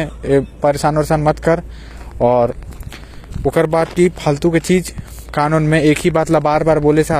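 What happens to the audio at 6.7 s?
Wi-Fi interference is present at 6.7 s, part of a span that starts at 1.86 s and runs to the end. A nearby Wi-Fi radio's transmissions are being picked up and rectified by the audio circuitry, so its beacon, repeating every 102.4 ms, comes through as a steady tick about ten times a second. Irregular rasps appear between ticks when data traffic bursts. The ticking sits roughly 30 dB below the speech: faint but persistent.

HE-AAC compression also colours the moment, as it does the whole clip. The damage is plainly audible and is likely the result of HE-AAC coding at a low bitrate, around 24 kbps. Only the lower spectrum is coded directly. The treble is rebuilt by copying lower bands upward under a coarse envelope, so its harmonics don't align with the real ones. Sibilants turn gritty or lispy, and nothing remains above 14.9 kHz.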